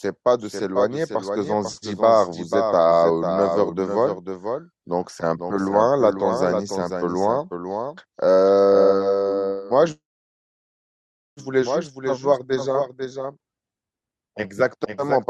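A doubled audio track runs through the whole of this speech recording: a second, full-band copy trails the original by about half a second, roughly 5 dB quieter, with no decay or room colouring to soften it. That fixed offset and clean, undamped echo most likely come from the same signal being captured a second time along a slower path and mixed back in, rather than from any acoustic reflection. A call audio freeze then occurs from 9.91 s to 11.40 s. The last sound is briefly stretched into a fading buzz or hiss, then goes silent for about 1.36 s before the speech resumes exactly where it stopped. Nothing is lost, but about 1.45 s of filler is inserted and everything after it arrives that much later. The likely cause is packets being held up in transit until the receiver's jitter buffer ran dry.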